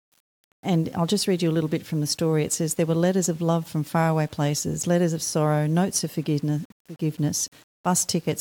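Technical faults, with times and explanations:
Throughout, low bit depth without dither: the speech carries a grainy, gritty distortion that rises and falls with the voice itself, roughest on quiet syllables and trailing sounds, with the faintest moments sputtering or dropping out. The likely cause is samples rounded to around 7 bits with no dither, so the rounding error tracks the waveform instead of becoming steady hiss, sitting roughly 30 dB below the signal.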